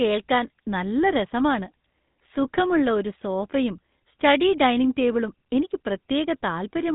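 Throughout the speech, GSM full-rate codec damage gives a buzzy, gravelly roughness from the regular-pulse vocal-tract model; a spectrogram shows nothing above 3.8 kHz.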